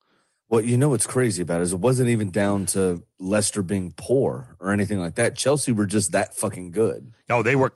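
No technical faults detected.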